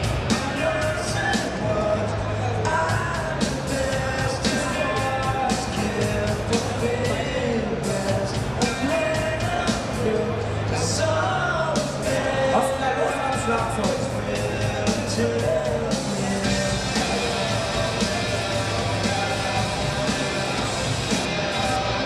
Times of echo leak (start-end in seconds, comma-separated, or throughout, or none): none